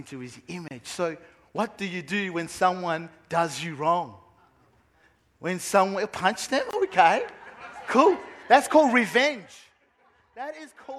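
A gap at a join of encoded pieces opens at 0.68 s, a silence of 28 ms, and again at 6.71 s, lasting 24 ms, six seconds apart. Each piece went through the encoder separately and was joined untrimmed, so the encoder's startup delay and last-frame padding stay in as dead air. The sound drops out abruptly, with edges blurred by the codec, then resumes exactly where it stopped.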